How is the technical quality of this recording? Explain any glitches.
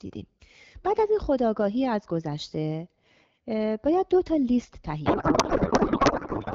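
The recording carries one serious glitch: a codec payload misread from 5.05 s through to the end. Before that, the speech is coded with AMR wideband (HD Voice), with the light coding texture of a rate that fits 12.65 kbit/s.

At 5.05 s, the speech suddenly gives way to garbled noise and warbling that barely tracks it. This happens when the receiver unpacks the codec bits in the wrong layout. The damage here points to octet-aligned AMR frames being read as bandwidth-efficient ones. Every frame still decodes, but the fields land in the wrong places, so the output is confident nonsense rather than silence. Packet loss would instead produce brief gaps or smoothed-over dropouts, and it would recover. This fault does not recover before the recording ends, because the two sides stay out of step.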